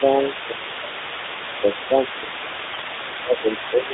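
From the start to the end of the clip, the other side's voice leaks through underneath the speech, about 10 dB lower. The likely cause is a loudspeaker feeding the microphone and an echo canceller that left a residue behind.

Speech is suppressed in double talk from 0.48 to 0.67 s, from 0.84 to 0.98 s, from 2.2 to 2.51 s, and from 3.2 s to the end. The speech dips by a few dB in the first stretch and by about 10 dB in the others. This likely happens because the canceller cannot separate the talker from the echo and turns both down.

AMR bit errors come in from 2.72 to 2.91 s. This span fits about nine 20 ms frames. Pitch and level hold roughly steady, but the sound turns hoarse, scratchy and gargly. Corrupted bits put the excitation pulses in the wrong places and skew the finer parameters. The line band runs roughly 250 Hz to 3.7 kHz, carried by the AMR narrowband mobile codec.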